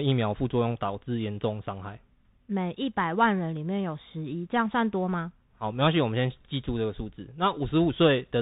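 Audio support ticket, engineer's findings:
Bluetooth CVSD headset codec, whole clip. Speech is boxed in below 4 kHz, with a grainy hiss sitting under it the entire time. S sounds come out scratchy, and louder bright bits smear as the one-bit delta coder's adaptive step can't keep up. Damage is plainly audible. Sound fits a 64 kbit/s CVSD headset link, so the culprit is likely a headset stuck on the narrowband profile.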